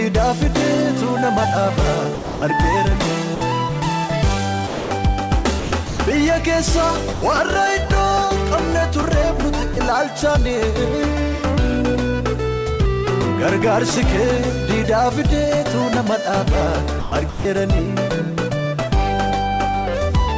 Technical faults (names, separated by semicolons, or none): sound dropped by the voice detector; sound chopped by the voice detector